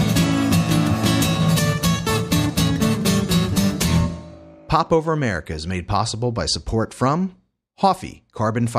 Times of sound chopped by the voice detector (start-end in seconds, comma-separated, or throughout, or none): none